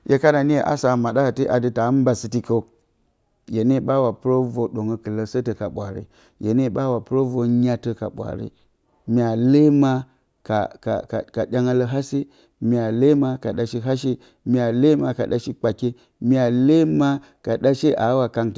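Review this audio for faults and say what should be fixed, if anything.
Nothing here calls for a fix, as the speech signal holds steady throughout with no audible technical faults.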